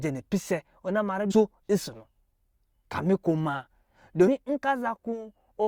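Speech recording with damaged data in a compressed stream at 1.30 to 1.32 s, between "na ma" and "nsɔ̄ nɔ": corrupted frames break decoder sync, producing a brief chirp or blip.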